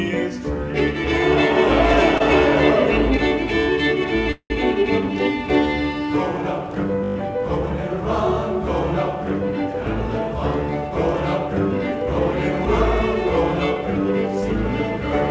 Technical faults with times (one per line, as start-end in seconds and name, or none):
2.18-2.22 short stall from a late packet
4.31-4.52 call audio freeze
7.04-7.16 system hang loop
9.69-12.07 jitter buffer speed-up